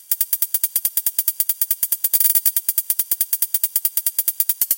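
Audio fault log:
Throughout, channel delay (doubling): one channel arrives 92.9 ms late, which fits a 4096-sample buffer, and summing to mono gives every onset an equal-level slap echo. The waveform shows each transient repeated at that spacing, and the spectrogram shows paired vertical onsets.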